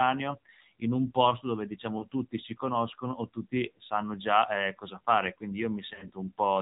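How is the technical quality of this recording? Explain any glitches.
The recording has plainly audible mobile-codec degradation throughout and two brief dropouts.

AMR narrowband mobile codec, throughout: the speech is band-limited to 4 kHz and rebuilt from a vocal-tract model driven by sparse pulses. The result sounds buzzy and synthetic, which fits a low mode around 7.4 kbps.

Lost AMR speech frames, at 1.98 to 2.05 s and 5.94 to 6.11 s: corrupted frames were replaced by repeating the last good pitch and vocal-tract settings at falling gain. The first, between "in un posto dove" and "tutti si conoscono o", is a short warble consistent with one 20 ms frame. The second spreads about 80 ms of losses over 160 ms, with runs up to 40 ms, giving smeared, dipping sound that returns rough.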